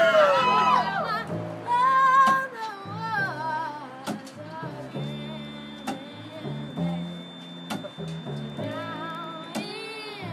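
At 4.85 s a thin, steady whistle at 3.6 kHz appears behind the sound and stays to the end, sitting roughly 20 dB below the signal and slowly swelling and fading in level. This is a feedback whistle, likely from the loudspeaker-to-microphone loop sitting just at the edge of feedback. That single frequency keeps ringing without building into a runaway howl.

From 8.50 s to 9.33 s, while the whistle continues, a low buzz at 21.5 Hz appears and rises and falls with the signal's level. This is a filter restarted on every block. The filter discards its state at each block boundary and begins from silence, so every block starts with a small transient. Repeated at that rate, the transients form the buzz, which fits a 2048-sample block.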